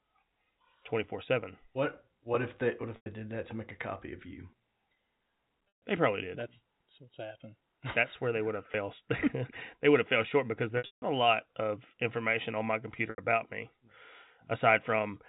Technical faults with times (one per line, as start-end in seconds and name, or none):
2.96-3.06 packet loss with pitch repetition
5.68-5.82 packet loss with pitch repetition
8.72-8.74 packet loss with pitch repetition
10.78-11.02 packet loss with pitch repetition
13.10-13.18 packet loss with pitch repetition